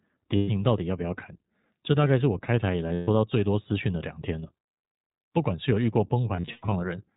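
The whole speech clip runs through the iLBC codec, and the damage is easy to hear. Everything above 4 kHz is gone, and the voice has a rough, slightly synthetic edge. That fits iLBC's 15.2 kbps mode with 20 ms frames, each coded independently.

Then there are lost iLBC frames. From 0.36 to 0.50 s, about 120 ms drops out. Again from 2.94 to 3.09 s, about 140 ms. The last spell runs from 6.36 to 6.74 s, where about 220 ms is scattered across 0.36 s, with the longest run around a tenth of a second. Each time, the decoder loops the last pitch cycle with noise, so you hear a held, buzzy vowel. The voice snaps back right afterwards.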